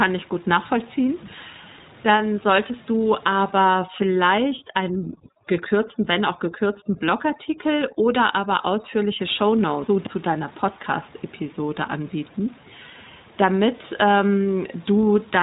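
From the start the whole clip carries the iLBC codec: nothing above 3.8 kHz gets through, and the speech has that slightly rough, synthetic edge. The damage is plainly audible, and the character fits iLBC's 20 ms frame mode at around 15.2 kbps.

Right after "solltest du", from 3.68 s to 9.19 s, there's overdone noise removal. The suppressor clamps bands near its noise estimate so hard that the room noise, sitting about 25 dB under the speech, drops and breaks up into twinkling specks.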